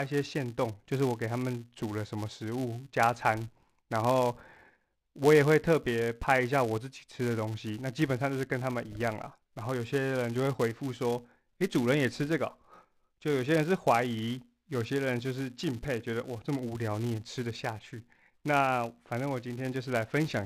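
Throughout the speech, the filter restarts on every block: it loses its state and begins each 5 ms block from silence, leaving a small transient at each boundary. The result is a 200 Hz buzz. Unlike steady hum, it tracks the level, swelling with loud passages and vanishing in pauses.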